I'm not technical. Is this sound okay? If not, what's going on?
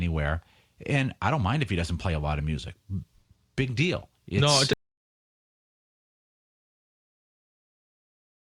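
No. The speech plays normally until about 4.73 s, then stops abruptly and the rest of the clip is complete silence, with no background hiss or room sound at all. This is an audio dropout to silence. The likely cause is that the input was lost, for example through a disconnected microphone, a failed connection or an accidental mute, while the recorder kept writing empty audio. Whatever was said after 4.73 s is gone.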